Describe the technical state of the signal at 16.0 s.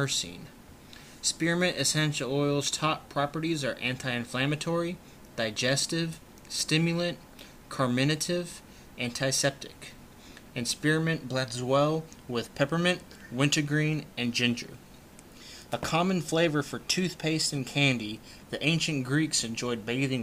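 At 16.0 s the signal is intact, with no dropout, distortion, glitch or other technical fault audible at that point.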